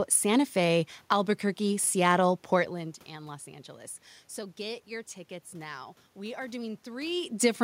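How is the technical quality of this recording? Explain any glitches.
The recording has no technical glitches to explain.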